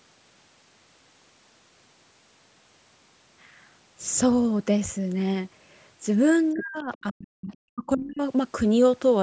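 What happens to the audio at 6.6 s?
From 6.53 to 7.51 s the speech is suppressed in double talk. It drops very deeply, likely because the echo canceller mistook both talkers for echo. Between 6.57 and 6.65 s, the other side's voice leaks through faintly, well below the talker. It likely comes from loudspeaker echo the canceller missed.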